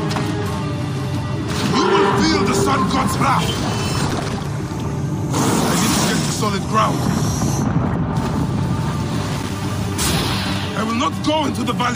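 Loose connector crackle appears from 4.10 to 4.47 s and again from 9.32 to 9.52 s: a worn or dirty contact repeatedly making and breaking, chopping the signal into ragged fragments, so each burst sounds like irregular scratchy crackle lasting a fraction of a second.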